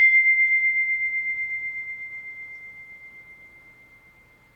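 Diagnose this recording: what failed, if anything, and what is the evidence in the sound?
Nothing in the music stood out as a fault on listening, so no failed stage can be identified here.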